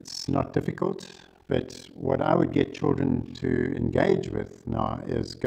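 From start to finish the audio carries overlap-add ripple. It was split into windowed frames and rejoined with an overlap whose windows do not sum to a constant gain, so the level swells and collapses once per frame, at around 40 times a second. The dips reach about 60 dB deep, nearly silencing the signal each cycle, which turns the whole clip into a harsh, rough tremolo rather than a gentle flutter.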